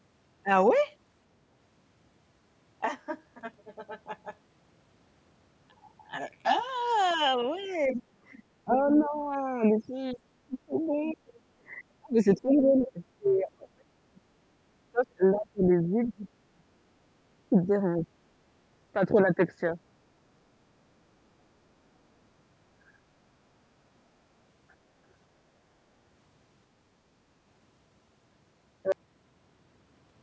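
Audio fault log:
2.85–6.69 s, channel delay (comb filtering): For these four seconds the sound turns hollow and phasey. One channel runs roughly 10 ms behind the other, and summing them to mono cancels the shared content at evenly spaced frequencies, with the first notch at around 40 Hz and more above it. Unlike a drop in level, nothing gets quieter overall. The notches stay fixed in frequency, so the tone colouring holds steady through the whole stretch.
7.89–8.03 s and 8.65–18.09 s, speech suppressed in double talk: The speech dips in both places. The first dip is brief, about 10 dB for roughly 150 ms. The second runs long, losing up to about 30 dB, and is affected for around seven seconds in total. The likely cause is an echo canceller that could not separate the talker from the loudspeaker echo and turned both down. Unlike background gating, the talker's own voice is what drops.
7.92–9.05 s, 10.83–11.12 s and 15.36–15.40 s, other side's voice leaking through: A second voice sits under the talker. 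It is about 15 dB down in the first, longer stretch, about 20 dB down at 10.8 s, and only a scrap about 30 dB down at 15.4 s. This is likely loudspeaker playback that the echo canceller failed to remove from the microphone. It is heard as an added voice, not as a change in the talker's own sound, which separates it from the suppression around it.
22.96–23.09 s and 24.77–24.89 s, background gated by the echo canceller: The room sound briefly drops out, by about 13 dB for roughly 150 ms and then by about 18 dB for roughly 100 ms, and each time it comes back promptly. The echo canceller clamps the microphone while the loudspeaker is active and releases it afterwards. Unlike double-talk suppression, the ambience is what dips here. The pauses go dead for a moment instead of a voice being cut.
28.92 s, cut-off end: The audio stops in the middle of a sound and falls straight to digital silence with no decay or room tail. 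The final buffers were never written, so everything after that point is empty. A natural fade or a gate closing would taper off. Here the level drops instantly to nothing and never returns, which marks it as truncation.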